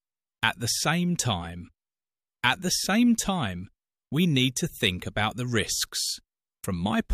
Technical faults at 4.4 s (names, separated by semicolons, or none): clock slip clicks